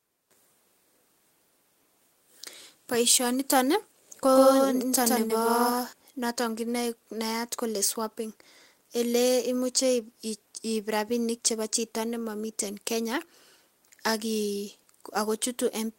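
From 4.35 s to 5.93 s, just after "nitoon ko", the speech is heard twice: a doubled audio track, with a second full-band copy at roughly the same level trailing the original by around 150 ms. The copy has no decay or room colour, and it cuts in and out abruptly at both ends, giving a hard slapback. The likely cause is a second, slower capture path or an edit leaving two unaligned copies mixed together.

Within that doubled stretch, between 5.27 s and 5.31 s, there is a short concealed packet loss. About 20 ms of audio did not reach the decoder in time, and the receiver synthesised roughly 20 ms to bridge it by extending the preceding sound before crossfading back into the real signal. The result is a brief smear or wobble. Any short consonant falling in that gap can drop out entirely.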